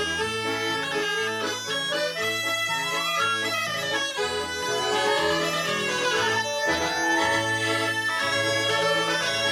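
From 4.63 s to the end, every sound is followed by an identical second copy about 150 ms later, at roughly the same loudness. It is a hard, full-band echo with no decay or room colour, cutting in abruptly. This doubled audio track likely comes from a second, slower capture path mixing the same signal in again.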